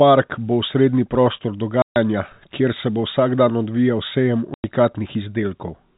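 At 1.82 s and 4.54 s, packet loss filled with silence cuts holes of 140 ms and 100 ms, consistent with 20 ms packets, into the band-limited telephone speech, each gap with hard edges.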